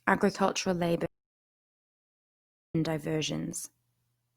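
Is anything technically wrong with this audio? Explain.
Yes. There is an audio dropout to silence from 1.06 s to 2.75 s. The input signal was likely lost during that stretch, through a disconnected device, a failed link or an accidental mute, while recording carried on writing silence. The speech cuts off abruptly mid-flow and returns just as suddenly, leaving about 1.69 s of silence with no room tone underneath. Whatever was spoken in that gap is gone from the recording.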